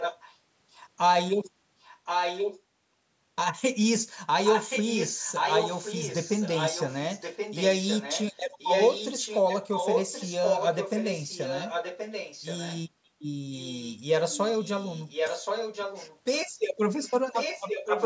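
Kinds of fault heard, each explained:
echo leak: A second copy of the speech trails it by about 1.08 s, mostly a little quieter, close to equal level around 1.8 to 2.6 s and faint near 13.5 to 14.0 s. Likely a loudspeaker end whose echo canceller let its microphone pickup return.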